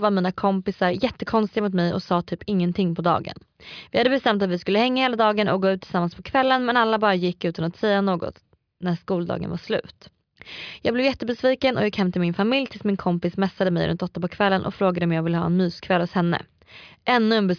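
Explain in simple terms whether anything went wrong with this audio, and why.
Nothing went wrong here: the speech shows no audible faults anywhere in the recording.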